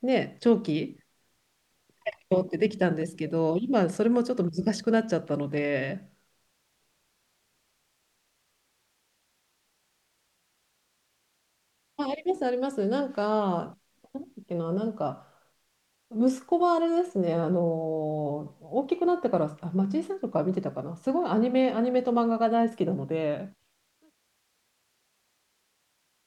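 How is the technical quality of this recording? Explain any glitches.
The recording's technical quality shows no glitches to explain; the smooth fade-out from around 23 s to 24.21 s is an ordinary editor's fade, not a fault.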